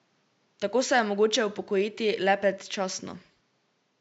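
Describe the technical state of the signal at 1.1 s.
At 1.1 s the speech signal is intact, with only the room's own background noise sitting about 44 dB below the speech.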